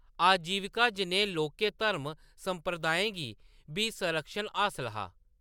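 No technical faults can be heard in this speech recording.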